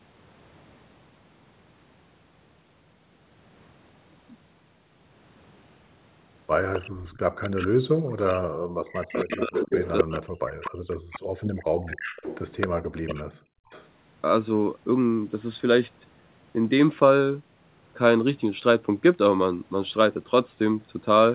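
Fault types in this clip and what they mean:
Echo leak: A delayed copy of the speech, trailing it by 262 ms, appears at 6.73 to 7.68 s, 8.97 to 10.96 s, 11.95 to 12.82 s and briefly at 13.69 to 13.93 s. It is likely loudspeaker sound that got past the echo canceller and was sent back. It starts faint, rises to nearly the talker's level in the middle stretch, then fades again. On a spectrogram, harmonic patterns repeat shifted about a quarter second later. The waveform shows smeared, doubled envelopes.
Background gated by the echo canceller: From 6.90 to 7.06 s, during the first echo stretch, the room background dips by about 10 dB for roughly 150 ms and then returns. The echo canceller pulled the microphone down hard while the loudspeaker was playing and let go moments later. On a spectrogram this is a short, lighter vertical strip in the low-level noise floor. On the waveform the noise between sounds briefly thins to a narrower band before widening again.
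Speech suppressed in double talk: From 8.13 to 12.02 s and again from 12.92 to 13.59 s, the talker's speech sinks and breaks into pieces, falling by something like 40 dB at its deepest. It is affected for roughly three seconds in the first span and under a second in the second. The likely cause is both sides talking at once, so the echo canceller turned everything down. On a spectrogram, harmonics and upper frequencies vanish in dark patches. The waveform envelope collapses in chunks and then jumps back.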